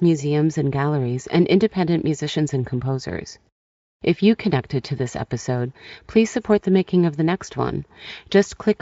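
No technical faults occur at any point in the speech.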